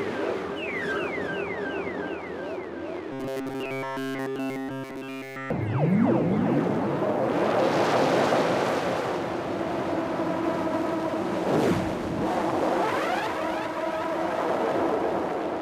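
An everyday-sound recording that turns into a rigid, metallic buzz pitched at 134 Hz from 3.12 to 5.50 s, with essentially all of that stretch affected. This robotic sound from repeated short buffers is likely a single block of about 7.5 ms being looped while fresh audio fails to arrive in time.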